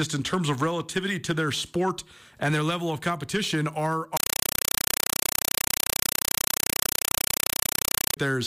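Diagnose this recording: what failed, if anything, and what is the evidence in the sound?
What failed is at the playback end, on the digital link. Right after "level of competition are", at 4.17 s, the speech is replaced by loud, chattering static that runs until 8.17 s. It's a compressed stream played as audio: undecoded AC-3 data treated as plain samples. Each frame comes out as a short burst of noise, about 5.33 ms, then silence from the padding, repeating 31.25 times a second, which fits a roughly 256 kbps Dolby Digital stream.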